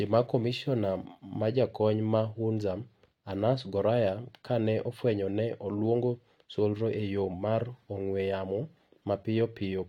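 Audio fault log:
Nothing stood out on listening to the speech.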